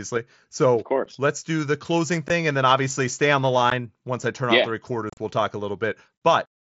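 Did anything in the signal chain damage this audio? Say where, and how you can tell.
Yes. The damage is at the wireless link between headset and phone: unconcealed Bluetooth headset packet loss. Short holes cut the speech at 1.05 s, 2.28 s and 3.70 s. The first lasts 7.5 ms and the others 15 ms each. From 5.10 to 5.17 s there is a rough, chopped patch, with 67.5 ms lost over 75 ms and the longest gap 37.5 ms. The gap sizes fit 7.5 ms packets. Nothing fills the missing packets, so the edges are abrupt. The light grain from the mSBC codec is a separate effect.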